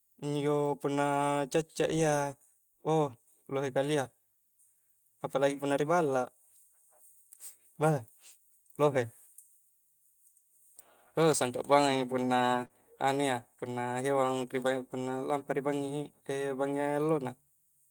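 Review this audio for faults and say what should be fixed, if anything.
Short concealed packet loss, 12.65–12.71 s: 40 ms of speech missed the decoder's deadline, so the receiver continued the preceding sound to fill the gap before blending back. Adding forward error correction or a deeper jitter buffer on the link would let such lost packets be recovered.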